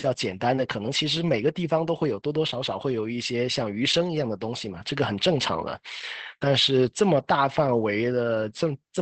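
From start to finish the speech carries Opus voice compression, squeezed through the SILK coder at a rate that fits about 12 kbps. The band's been narrowed to wideband, so nothing sits above 8.4 kHz, and the coarse excitation coding leaves the voice muffled, a bit hoarse and faintly robotic.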